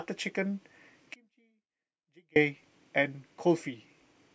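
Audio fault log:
1.14–2.36 s, audio dropout to a faint residue: the speech cuts out abruptly for about 1.22 s and returns just as suddenly, with no fade on either edge. The gap is not true silence but a faint leak of sound roughly 35 dB below the normal level, so the path after the break stayed live while the wanted signal was lost, likely through a brief interruption upstream of the final stage.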